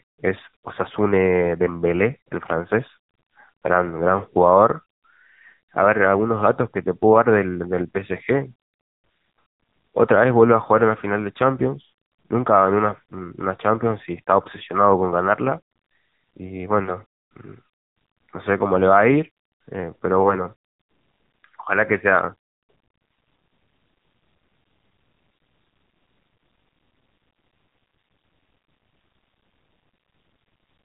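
Throughout, the speech sounds buzzy, synthetic and muffled, with nothing above 3.8 kHz: heavy AMR narrowband mobile codec damage, at a low bitrate that fits about 6.7 kbps.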